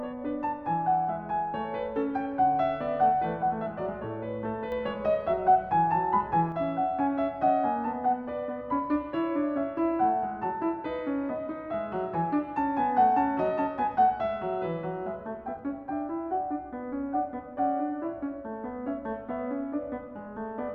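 A digital gain stage in the chain likely stepped its setting from one sample to the next with no ramp, producing a sudden gain jump in this music clip. At 4.72 s the level rises abruptly by about 5 dB, and the music and its background noise lift together as one block rather than through any natural swell. The raised level holds until 6.52 s, where it drops back just as suddenly.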